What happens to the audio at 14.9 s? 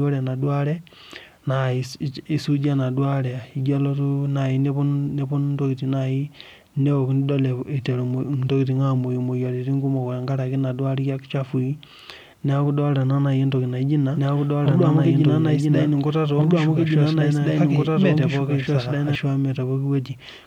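At 14.9 s the speech is doubled. A doubled audio track runs from 14.15 s to 19.15 s. A second copy of the same speech plays about one and a half seconds behind the first, at roughly the same loudness. It is full-band and dry, with no decay or room colour. It cuts in and out abruptly at the span's edges. The likely cause is a second capture path or an edit that leaves two copies out of step.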